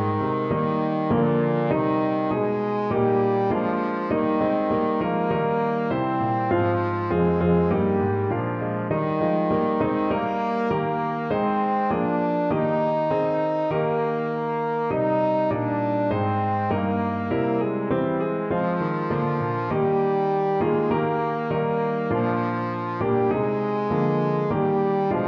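No faults detected anywhere in the audio; nothing to fix.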